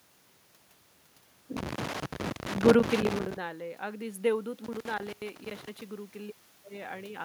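A worn or dirty contact in the cable or connector is making and breaking as it moves, producing loose connector crackle in this speech clip from 1.57 to 3.37 s and again from 4.64 to 5.81 s. It chops the signal into irregular bursts of crackle and scratching, with a level shift around 3 s from the talker moving.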